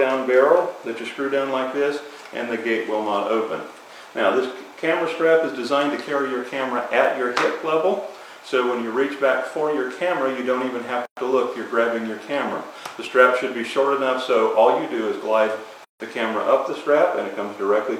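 Timecode bleed runs throughout: linear timecode at 29.97 frames per second leaks in about 30 dB down, a warbling chirp near 1 and 2 kHz, shown as steady spectrogram lines. Gaps at a join of encoded pieces open at 11.05–11.17 s (117 ms) and 15.85–16.00 s (156 ms), where encoder delay and padding left silences with smeared edges in the waveform before the sound resumes.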